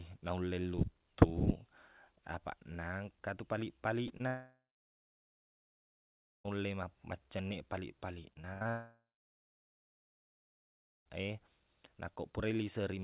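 Two brief smears at 4.08 s and 4.18 s each blur about 20 ms of the speech. This is short concealed packet loss: those pieces arrived too late to decode, and the receiver bridged each hole by extending the preceding sound before blending back in.

From 4.27 s to 6.46 s the sound trails off into a fading buzz, then about 1.8 s of silence, and resumes with a stretch of speech missing. A long network dropout is the likely cause: no packets arrived for over two seconds, so the receiver stretched the last sound until it gave out.

Between 8.33 s and 8.67 s the speech turns choppy, broken by four gaps, the longest 73 ms. This is repeated packet loss giving robotic sound: packets kept going missing, and patching each hole in turn left about 40 percent of that span synthesised rather than received.

From 8.70 s to 11.07 s the sound again fades into a buzz and then roughly 2.0 s of silence before speech returns with content lost. 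This second long network dropout likely has the same cause: a gap of nearly 2.4 s in arriving packets, only its first moments filled by extending the preceding sound. Throughout, nothing is heard above 4 kHz, which fits the narrowband G.711 A-law call path.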